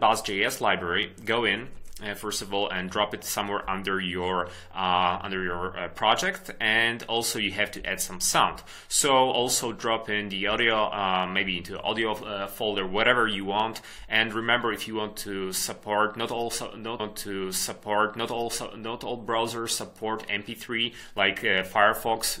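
At 16.99 s a stream segment repeated: the player fetched or queued the same chunk twice, so about 2.0 s of audio plays again until 18.98 s, after a small blip at the jump back. Unlike an echo or stutter, the whole passage returns intact, once.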